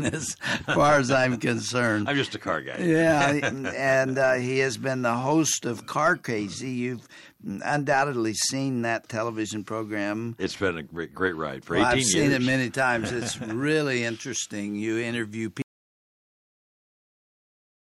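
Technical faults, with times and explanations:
15.62 s to end, audio dropout to silence: sound cuts off mid-flow into silence, no room tone, likely from lost input while recording continued.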